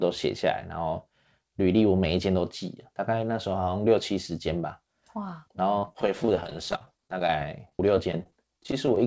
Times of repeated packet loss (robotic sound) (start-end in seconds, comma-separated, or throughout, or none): 5.79-8.97